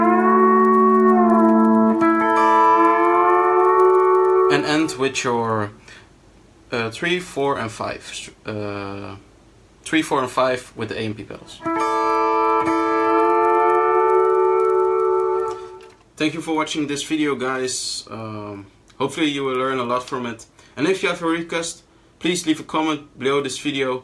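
The resampler restarted on every block throughout. A steady 20 Hz tick sits under the sound, one per 50 ms block edge, in a 48 kHz to 24 kHz conversion.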